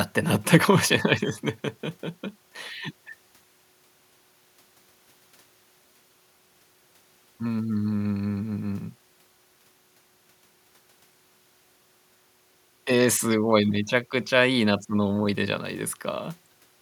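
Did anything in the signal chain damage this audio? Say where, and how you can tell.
No, nothing in the signal chain damaged this audio.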